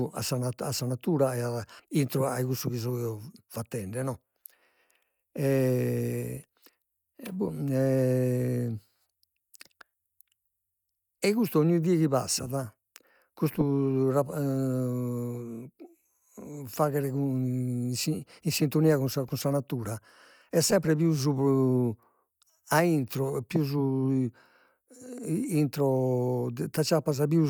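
Nothing in this speech recording stands out as a technical fault at any point, so there's nothing here to flag.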